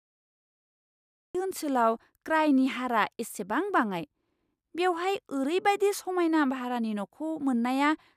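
A speech clip with a cut-off start. The first 1.35 s are pure digital silence. At 1.35 s the speech enters abruptly, mid-sound, with no natural attack or fade-in. The capture or stream began late, so the opening was simply never recorded.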